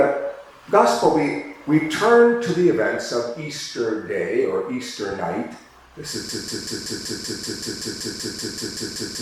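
At 6.29 s the audio locks into a broken-record loop: a fragment of about 0.19 s repeats back to back, roughly fifteen times, until the clip ends. It sounds like a rapid stutter replacing the rest of the audio. The likely cause is a stalled player, encoder or stream that kept resending its last buffered piece, so the material after that moment is lost. On a waveform and spectrogram, an identical block tiles every 0.19 s through to the end.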